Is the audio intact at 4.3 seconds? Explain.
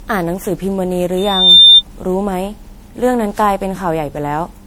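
No. At 4.3 seconds the speech carries generation loss, which runs through the whole clip. The sound is swirly, smeared and hollow, with consonant attacks blurred. The likely cause is repeated MP3 decoding and re-encoding, around ten passes at a rate that sounds near 96 kbit/s. Each pass lands on a shifted frame grid and adds its own quantisation noise and spectral gaps. A single low-bitrate encode would sound duller but cleaner, without this cumulative hollowness and smearing.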